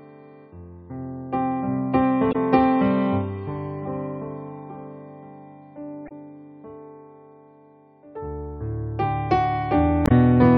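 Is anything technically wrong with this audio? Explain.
Yes. Short chirps, about 50 to 60 ms each, break the sound at 2.31–2.36 s, 6.06–6.12 s and 10.06–10.12 s. These come from damaged data in the compressed stream. Corrupted bytes garble those frames, so the decoder loses sync and outputs a brief squawk until it locks onto the next valid frame header.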